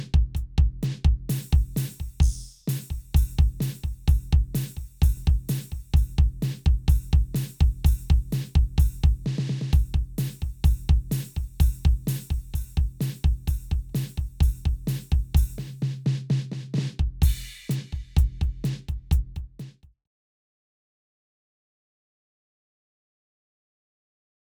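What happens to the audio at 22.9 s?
Nothing goes wrong at 22.9 s; the audio is intact there.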